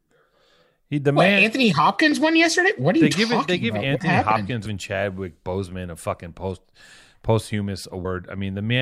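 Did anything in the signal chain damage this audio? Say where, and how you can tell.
Yes. At about 8.04 s there is a brief blip of roughly 14 ms, which points to damaged data in a compressed stream at the codec or storage stage. Corrupted bytes made the decoder misread a frame, lose sync and hunt for the next valid header, so it briefly output garbage. A single-sample click from a converter or wiring fault would be a dry tick. This one is a wrongly decoded frame.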